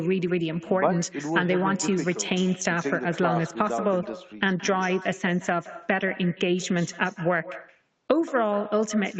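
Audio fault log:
throughout, echo with no canceller: each phrase returns about 150 ms later as a quieter, thinner copy, about 16 dB down. The far end's loudspeaker feeds its microphone and nothing removes it. A spectrogram shows every syllable trailed by a faint, delayed duplicate, and the waveform a small offset repeat.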